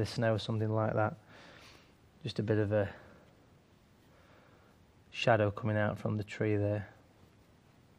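Nothing audible points to a fault anywhere in the clip.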